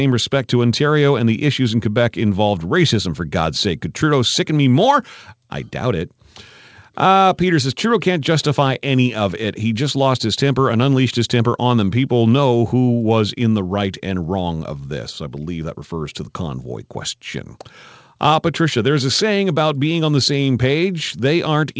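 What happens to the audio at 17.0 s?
Nothing goes wrong at 17.0 s: the speech carries on intact through the call path, with only the ordinary wideband-call character of the codec and no dropout, glitch or distortion at that point.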